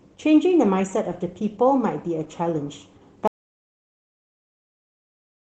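From the start, the speech carries Opus voice compression at 16 kbps in hybrid mode, with SILK coding the band below 8 kHz and CELT the top. At this rate the coarse excitation coding is plainly audible, leaving the voice hoarse, slightly muffled and faintly robotic.

At 3.28 s an audio dropout to silence begins and runs to the end of the clip. The sound cuts off mid-flow into silence with no room tone, which points to the input signal being lost, likely through a disconnect or an unintended mute.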